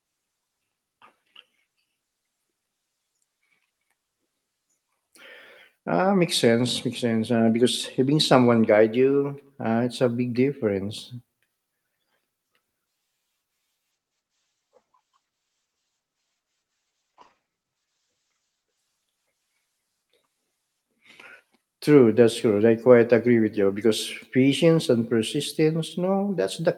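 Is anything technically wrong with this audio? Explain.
Yes. From 13.93 s to 21.87 s there is a call bitrate drop. The call's bandwidth estimate fell and the encoder was pushed to a much lower rate. The sound fits a fall from about 48 kbps to around 11 kbps, held at the bottom for about 4.6 s. The coarser coding makes the speech rough and watery. The top end is cut back to about 8 kHz, so it also turns muffled, before the normal call path, with its 12 kHz ceiling, returns.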